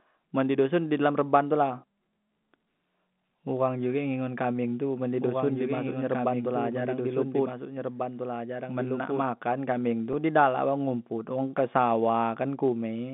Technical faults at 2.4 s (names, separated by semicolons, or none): block size mismatch (truncated)